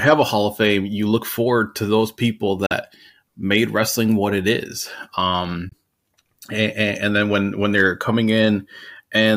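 Speech with two abrupt silences, at 2.66–2.73 s just after "forward to those people" and at 5.69–5.73 s. Each time the speech resumes further along, skipping about 43 ms and 21 ms, which fits one or two lost frames: likely a Bluetooth dropout.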